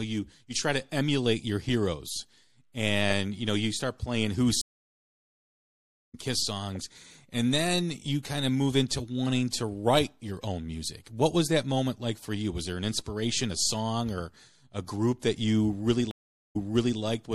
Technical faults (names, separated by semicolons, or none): MP3 compression; stream reconnect